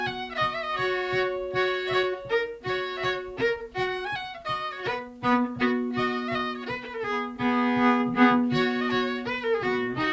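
Nothing goes wrong anywhere in this audio; there are no technical faults to point out.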